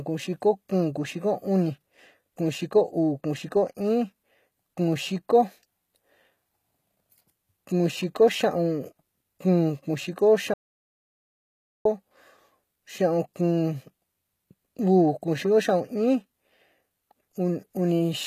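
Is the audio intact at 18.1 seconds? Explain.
No. HE-AAC compression runs through the whole clip, including 18.1 s, and is plainly audible there. It likely comes from spectral band replication, where the treble is copied from lower bands, so s sounds turn gritty and lispy and nothing sounds above 14.9 kHz, which fits a very low bitrate around 20 kbps.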